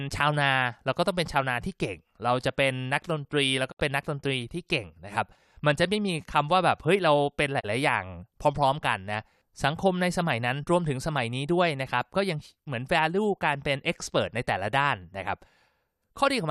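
Digital broadcast dropouts cut into this speech clip at 3.70 to 3.81 s and 7.59 to 7.65 s. Each time the sound fades out over about 20 ms and goes silent, consistent with a receiver muting after losing frames. The first gap suggests roughly three frames lost and the second suggests one.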